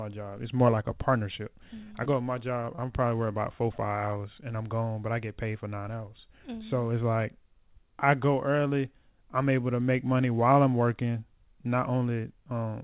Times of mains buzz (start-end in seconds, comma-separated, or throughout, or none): none